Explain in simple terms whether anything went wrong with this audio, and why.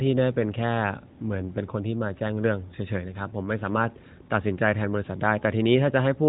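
Nothing went wrong here.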